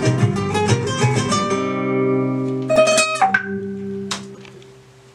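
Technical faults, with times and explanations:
2.76 s and 4.34–4.38 s, corrupt frame decoded: the decoder played damaged compressed frames, putting energy at wrong frequencies, heard as a loud blip near -10 dBFS, then a fainter one near -30 dBFS.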